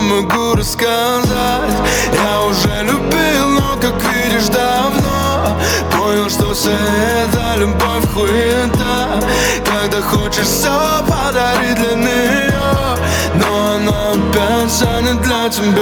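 Gain pumping runs through the whole clip. The gain swings by about 10 dB, pulled down under every loud sound. Loud and quiet passages sit close in level and feel squashed. The likely cause is excessive input gain driving a fast limiter.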